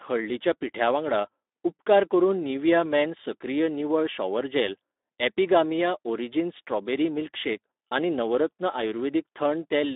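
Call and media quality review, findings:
Speex codec artefacts, throughout the clip: speech sounds hoarse, grainy and noisy, consistent with a low-rate CELP excitation, fitting roughly 11 kbps. Spectrogram shows smeared, noisy harmonics and energy confined to 250 Hz–3.7 kHz, with a hard edge above 3.7 kHz.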